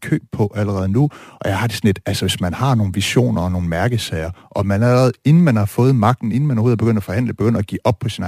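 From start to end, the speech shows crude rate conversion. Samples were dropped without filtering, which fits a 48 kHz to 44.1 kHz change. The error sits about 30 dB below the speech. It adds a gritty, inharmonic fizz on loud, bright sounds.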